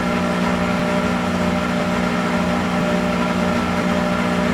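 Overlapping chunks at 0.80, 1.80, 2.81 and 3.82 s: the audio was handled in 1.0 s blocks, each starting about 7 ms before the previous one ended. That sliver plays twice at every join, giving a click or stutter once per second.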